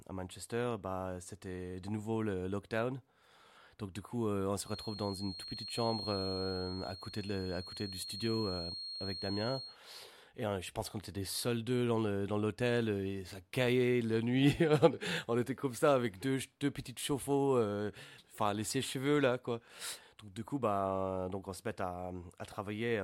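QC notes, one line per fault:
4.61 to 9.79 s, feedback whistle: a steady thin tone at about 4.3 kHz sits behind the speech, roughly 10 dB below it, rising and sinking gently in level rather than growing into a howl. This is likely a loudspeaker-to-microphone loop held just short of runaway gain, so one frequency keeps ringing. On a spectrogram it shows as a single narrow horizontal line at 4.3 kHz spanning the range, with its brightness drifting slowly.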